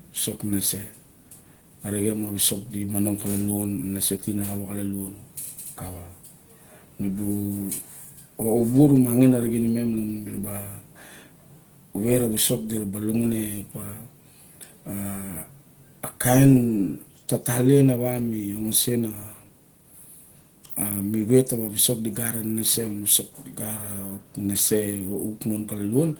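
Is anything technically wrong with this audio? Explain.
Yes. Opus compression damage is plainly audible for the whole clip. The speech sounds hoarse and muffled, with a grainy, rough texture. This is likely low-bitrate Opus, consistent with a rate near 16 kbps. At that rate the encoder blends its speech coder for the lower band with band-energy coding above it, so fine detail is replaced by folded or noise-filled content. On a spectrogram, harmonics look smeared and noisy rather than crisp, with few outright holes. Energy still reaches about 20.1 kHz.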